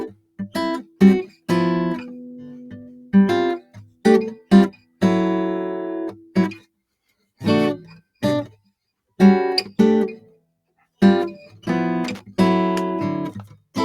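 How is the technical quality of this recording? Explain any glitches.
The technical quality is poor: a speech-oriented noise suppressor is processing this music, and a connector crackles near the end.

The noise suppressor applied to music here misreads sustained tones and ambience as noise and keeps pulling them down, so the level swings by around 10 dB throughout. Held material sinks and recovers, giving a pumping, thinned-out character while attacks pass through.

Sound is cut by the noise suppressor at 0.08–0.39 s, 0.83–1.01 s, 1.26–1.49 s, 2.91–3.13 s, 3.60–4.05 s, 4.35–4.51 s, 4.71–5.02 s and 6.15–6.36 s. The gain reduction clamps harder on these passages, by about 10 to 21 dB, so sustains and decays drop out abruptly.

Loose connector crackle appears from 12.04 to 12.21 s. A contact in the signal path is intermittently making and breaking, chopping the signal into a brief, irregular burst of scratchy crackle.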